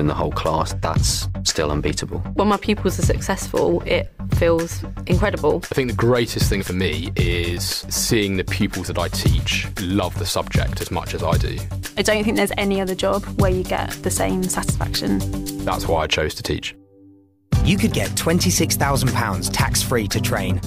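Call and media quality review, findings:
One channel drops out, 14.70–14.82 s, about 0.11 s. Abrupt level dip of about 6 dB in the mono sum, then full return. Likely cause: brief loss of one stereo channel upstream. Shared content halves, content unique to that channel vanishes.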